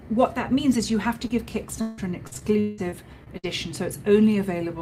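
At 1.27 to 1.31 s there is a short concealed packet loss: about 20 ms of audio never arrived in time, so the decoder patched the hole by extending the preceding sound and then blending back into the received signal. It is heard as a single brief smear in the sound. What separates it from the later fault is that it is one isolated gap, with the real audio resuming straight away and nothing recurring.

From 1.81 to 3.45 s comes repeated packet loss with robotic sound. Eight separate gaps fall within this stretch, adding up to about 520 ms of missing audio, with the longest running to 177 ms. Each one is filled by continuing the last sound, and the next arrives before the signal settles, so about 31 percent of the span is synthetic. Unlike the single dropout, the losses keep piling up, leaving the passage choppy and robotic, with pieces missing.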